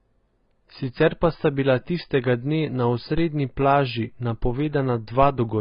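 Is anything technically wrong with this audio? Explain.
Yes, there are two kinds of fault. Throughout, the speech sounds dull, smeared and warbly, with nothing above 5 kHz. That is likely AAC compression at a very low bitrate, around 16 kbps, where the coder has dropped the top band and quantised what remains coarsely.

At 3.18 s and again at 5.23 s, a low thump marks a DC step. The waveform's zero line jumps suddenly, then the offset decays away as a 5 Hz high-pass pulls it back toward zero.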